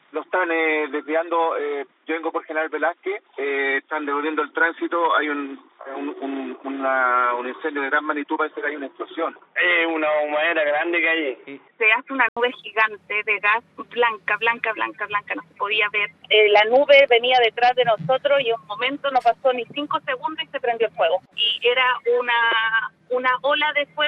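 From 0 to 12.37 s the sound is dull and boxy with nothing above 3.8 kHz, then clears after an 80 ms gap, likely an input switched to a poorer device.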